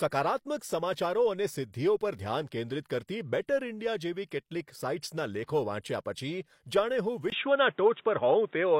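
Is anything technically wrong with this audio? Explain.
Yes. Input switched to a poorer device at 7.3 s, running to the end. A 20 ms gap, likely from the recording changing to a narrower-band microphone or headset profile. The speech then loses everything above 3.8 kHz, shifts level by around 5 dB, and carries new background noise well beneath it.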